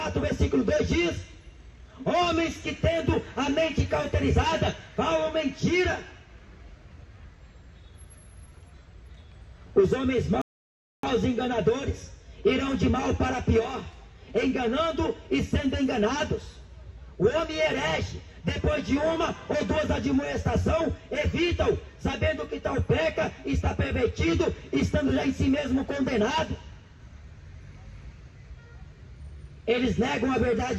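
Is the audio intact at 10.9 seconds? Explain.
No: a rebuffering stall runs from 10.42 to 11.04 s. The player exhausted its downloaded audio and paused until more arrived, so 10.9 s falls in silence. Playback then resumes exactly where it stopped: nothing is missing, but 0.62 s of delay is added.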